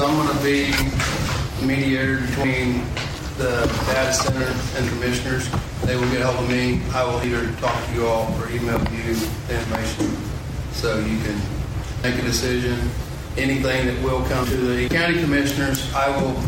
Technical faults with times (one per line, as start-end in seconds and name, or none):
4.84 audio missing between chunks
7.24 audio missing between chunks
12.04 audio missing between chunks